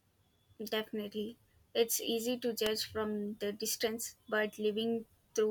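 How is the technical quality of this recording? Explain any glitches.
The recording has one audible glitch, an electrical switching spike. At 2.66 s, between "easy to" and "from the distance", a sharp snap sits on top of the speech. It is likely an arc from a nearby switch or motor coupling into the audio line. On a waveform it shows as a narrow spike peaking near -15 dBFS, and on a spectrogram as a thin vertical stripe spanning the full frequency range.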